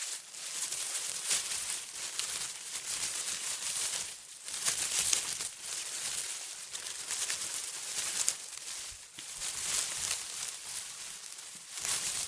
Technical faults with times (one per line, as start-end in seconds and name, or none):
none